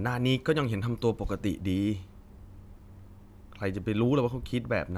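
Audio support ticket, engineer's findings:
No faults found in this speech clip; nothing to report for this ticket.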